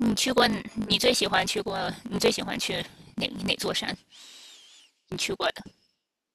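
Speech with a block size mismatch (truncated) throughout: each block's tail is dropped, giving a 50 Hz buzz and delivery about 1.16 times fast at near-normal pitch, consistent with 1024-sample blocks. A spectrogram shows vertical seams every 20 ms; the waveform shows matching jumps.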